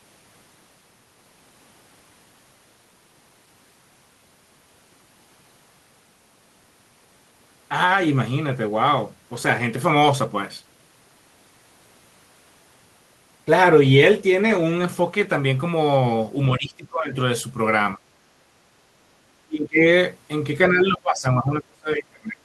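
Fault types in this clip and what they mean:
Speech suppressed in double talk: the speech level collapses at 16.53, 17.96, 19.45 and from 20.7 to the end, by roughly 10 to 30 dB, likely an echo canceller ducking overlapping talk. The waveform envelope shows abrupt hollows, and the spectrogram fades or blanks there.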